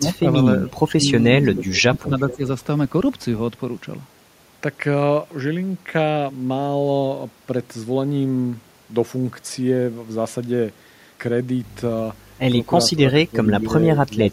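From 0.00 to 0.27 s and again from 0.60 to 1.05 s, the speech dips and breaks up in a pattern typical of speech suppressed in double talk, likely an echo canceller ducking the talker while the far end speaks. The waveform shows the envelope cut by around 15 to 20 dB in short bites. At 1.46 to 1.63 s an echo leak lets a faint copy through about 15 dB down and 435 ms late, seen as a weak repeated smear on the spectrogram. The same suppression returns from 1.65 to 2.44 s, with a second leak fragment at 2.30 to 2.36 s, and again from 12.94 to 13.36 s and 13.67 to 14.33 s.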